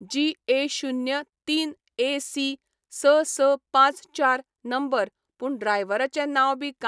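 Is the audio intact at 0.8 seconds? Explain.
Yes, the speech at 0.8 seconds is intact, with no dropout, click, distortion or other fault audible at that moment.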